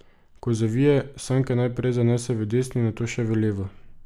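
No technical faults are audible.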